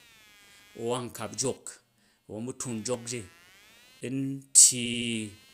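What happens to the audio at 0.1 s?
At 0.1 s the speech carries computer activity noise, present throughout the clip: processor or peripheral load disturbs the audio ground, adding a faint buzzing chirp pulsing around 200 times a second, well below the voice. A spectrogram shows evenly spaced vertical striations and harmonic lines independent of the speech.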